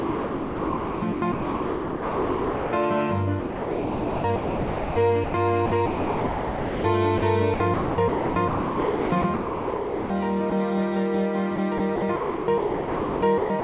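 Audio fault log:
0.0–2.72, 3.4–4.96, 5.66–6.84, 7.54–10.1, 11.56–13.64 s, sound chopped by the voice detector: the sender likely gated repeatedly, swapping roughly 1–2.5 s per stretch for comfort noise.
5.24–5.34, 7.18–7.22, 10.50–10.52 s, sound dropped by the voice detector: brief 100, 40 and 20 ms gaps filled with steady comfort noise, likely where quiet sound was misread as background.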